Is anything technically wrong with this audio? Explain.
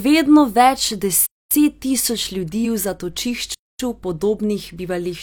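Yes, there are two kinds of fault in this speech.

A gap between chunks occurs at 1.26–1.51 s, between "vedno več" and "tisoč ljudi", and again at 3.54–3.79 s. Each is a 250 ms hole of silence. The audio was delivered in 2.5 s chunks with silence left at the joins. Nothing is lost; the speech resumes exactly where it stopped.

Compressed frames are skipped at 2.60–2.65 s, just after "tisoč ljudi". Roughly ten frames of 46.4 ms each, about half a second of speech, never play. Instead of a silent hole, the speech jumps ahead.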